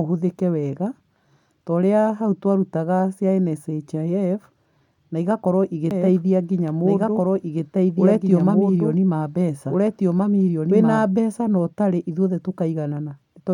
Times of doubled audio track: 5.91-11.05

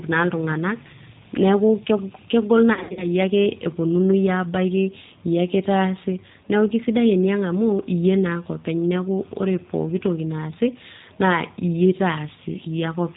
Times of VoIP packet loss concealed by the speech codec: 2.73-3.06

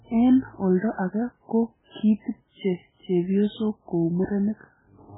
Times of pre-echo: 0.79-0.98, 1.91-1.95, 2.22-2.26

